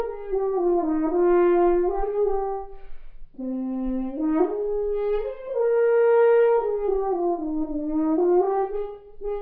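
No faults can be heard anywhere in this recording.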